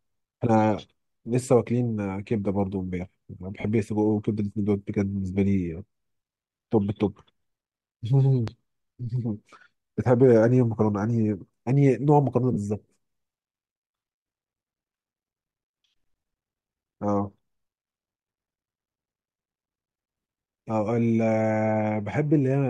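At 3.60 s the speech breaks into a short noisy smear lasting about 37.5 ms. These are lost LE Audio frames. The gap fits five 7.5 ms frames going missing on the Bluetooth link. The LC3 decoder covered it by repeating the last received spectrum with randomised signs, so the voiced tone turns to hiss-like mush rather than a clean dropout. The same fault recurs at 12.53 s, again about 37.5 ms long, with the same smeared texture.

At 8.48 s a single loud pop lands on top of the speech, which continues underneath. The pop peaks around 10 dB above the surrounding signal and is over within roughly 30 ms. It sounds like a sharp click-thump. The likely source is a sudden voltage step from a switch, static discharge or a driver glitch. The circuitry after that point shaped the step into this brief pulse.

The light lossy compression that carries the whole clip does only slight damage.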